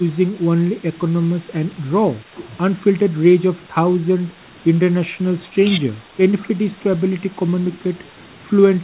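Speech that dips in brief patches of roughly 5 dB between 0.32 and 1.47 s, 2.21 and 2.33 s, and 6.76 and 8.14 s, likely speech suppressed in double talk as the echo canceller ducks the talker during cross-talk; unlike packet-loss dropouts, the sound dips rather than vanishing outright.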